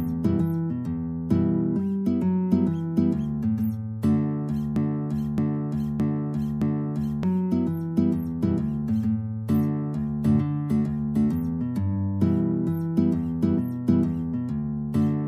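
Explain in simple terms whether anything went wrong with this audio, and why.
Something did go wrong, around 4.76 s to 7.23 s. That's a broken-record loop: a short chunk about 0.62 seconds long plays four times in a row, exactly the same each time, like a skipping CD. The likely cause is that the player or stream stalled and kept resending the last piece it had instead of moving on. Whatever should have played during those two and a half seconds is simply gone.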